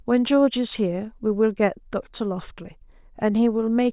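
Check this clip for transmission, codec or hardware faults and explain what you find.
Nothing faulty can be heard anywhere in this speech.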